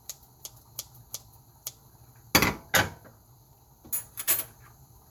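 No technical faults can be heard anywhere in this sound.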